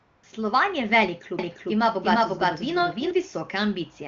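From 0 to 0.23 s the phone has judged the line silent and stopped sending speech frames, so the receiver fills the gap with AMR comfort noise. This is a smooth, steady synthetic hiss built from a coarse level and spectrum estimate. It stands in for the real background until it switches out.

Between 1.39 and 3.11 s a second copy of the audio runs underneath, likely captured again through a slower path. This doubled audio track trails about 400 ms behind at roughly equal loudness. It is full-band and dry, and it starts and stops abruptly at those points.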